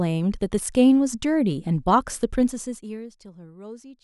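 A level change in this speech clip is applied in coarse, unsmoothed steps, roughly a hundred per second, which produces zipper noise from 2.42 to 3.15 s. As the level drops by around 20 dB, each step adds a tiny click, giving a fast ticking that rides on the voice.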